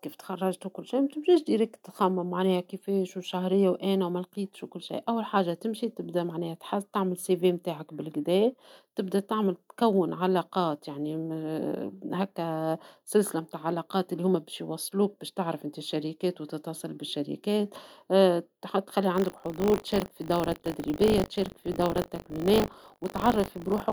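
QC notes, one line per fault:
19.14 to 23.93 s, buffer tearing: a steady robotic buzz at 50 Hz rides on the speech until the end, present only while there is signal. The writing program and the playback hardware have drifted so they cross inside each 20 ms period, leaving a small slice, roughly 7%, of every buffer filled with audio from about 40 ms earlier. The hard joins at both edges of that stale slice repeat at the buffer rate, producing the rattle.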